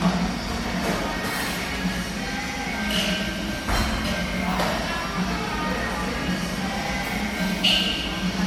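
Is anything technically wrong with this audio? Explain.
Yes, generation loss runs throughout: swirly, hollow, smeared sound with blurred attacks, likely from about ten lossy re-encodes fitting MP3 at 96 kbit/s. A spectrogram shows accumulating holes and nothing above 19.8 kHz.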